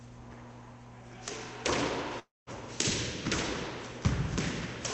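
From 2.19 to 2.50 s the sound breaks up, likely a long network dropout. The receiver stretches the last sound into a fading buzz, then about 180 ms of silence. Roughly 280 ms never arrives. Over the Opus call path, tops near 8 kHz.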